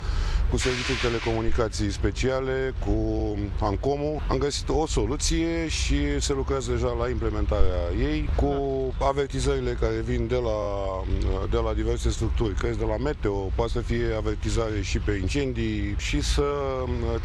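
At 7.60 s a phantom power thump appears: a deep, low-frequency bump lasting to 7.72 s and decaying in about 26 ms, as a supply step passes through the input's coupling capacitors. At 10.62 s repeated frames cause a brief stutter, with a 23.2 ms block, which fits a single compressed frame, replayed twice more, adding 46.4 ms to the audio.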